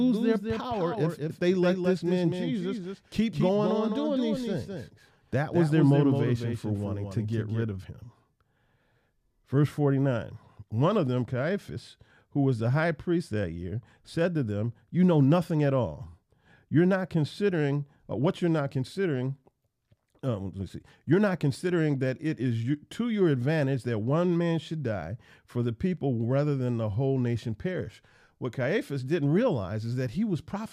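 Until 7.64 s, just before "of him", there's a doubled audio track: a quieter, dry copy lagging about a fifth of a second, likely a slower second capture path.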